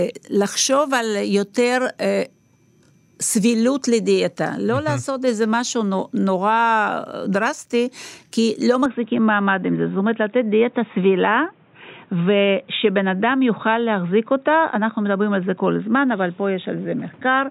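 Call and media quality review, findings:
Speech turns dull and narrowband from 8.86 s to the end, with no gap at the changeover and no level jump. Likely input switched to a poorer device. Spectrogram shows energy above 3.8 kHz cut off abruptly, plus a new noise floor roughly 35 dB down.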